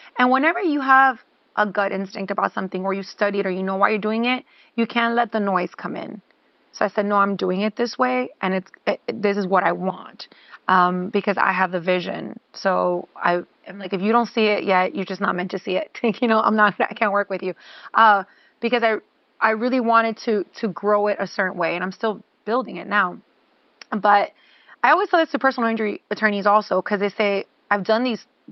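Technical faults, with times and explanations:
No technical faults: room noise sits about 41 dB below the speech, and the call path's Opus coding at 32 kbps limits the band to 8 kHz.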